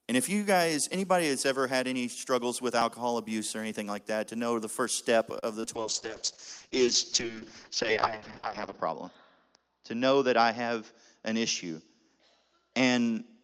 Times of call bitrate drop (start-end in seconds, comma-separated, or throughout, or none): 5.76-13.43